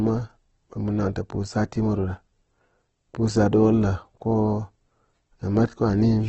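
All the way through, the speech sounds grainy and rough, with a noisy haze where clean detail should be, and nothing at all above about 8.2 kHz. That's likely heavy Opus compression in its CELT mode, starved of bits, which fits something around 12 kbps.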